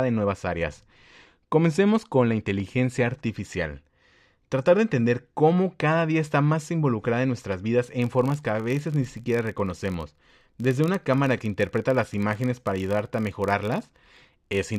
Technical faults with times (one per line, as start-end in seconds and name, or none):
8.02-14.79 filter restarted on every block